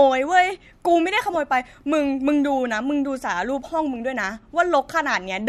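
A short speech recording with no technical fault to report: the signal holds steady throughout, with no audible break, level problem or disturbance at any point.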